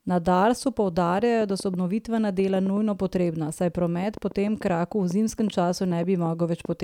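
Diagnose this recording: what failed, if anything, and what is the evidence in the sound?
A train of clicks, 1.41 to 6.73 s: about twenty pops, uneven at 3.8 per second, persisting through pauses, so likely analogue-wiring interference, not codec damage.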